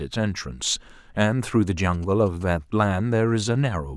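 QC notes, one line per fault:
1.79–2.43 s, GSM signalling bursts: a nearby phone's radio bursts, rectified into galloping ticks and 217 Hz buzz about 25 dB below the speech; the spectrogram shows blocks of harmonics spaced 217 Hz apart.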